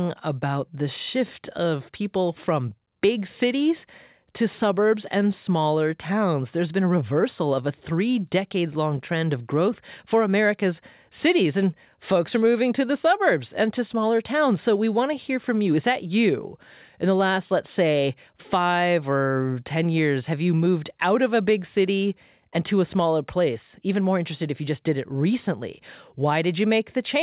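No faults: the speech arrives over a call path with nothing above 4 kHz, which fits a G.711-type telephone codec.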